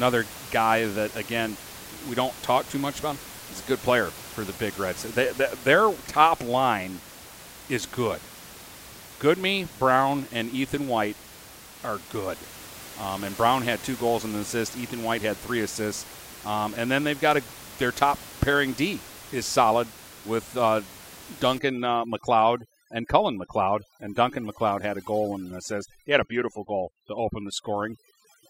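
At 21.59 s the overdone noise removal kicks in and stays to the end of the recording. Up to then you've got room noise sitting about 18 dB under the speech. After that point the noise reducer is clearly set too hard. It's knocking individual frequency bands right down whenever they drift close to its noise estimate, so the background drops and breaks up into little twinkling specks. Quieter parts of the voice get taken out too.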